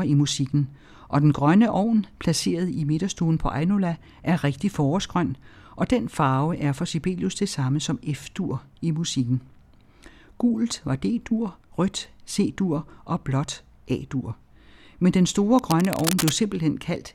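From 15.59 to 16.37 s, a burst of cable scratch noise runs over the speech. It sounds like dense, uneven scratching and rustling, roughly 10 dB below the voice. The likely cause is a worn cable or connector being moved, so its contact resistance keeps jumping.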